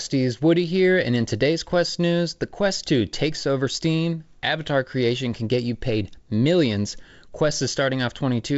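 No technical faults can be heard in the speech. It comes over a G.722 wideband telephone link at 56 kbit/s, so nothing is heard above 7.7 kHz, and the coding leaves only light traces.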